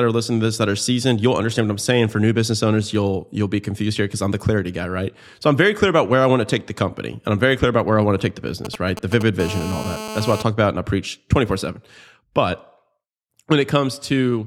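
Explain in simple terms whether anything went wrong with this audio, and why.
Right after "want to take the", from 8.65 to 9.23 s, you hear GSM signalling bursts: a galloping tick-tick pattern as a nearby 2G phone pings the network.

Then from 9.40 to 10.43 s, just before "talk about and I", comes GSM phone buzz, a harsh 217 Hz rasp from a nearby 2G phone transmitting steadily during a call.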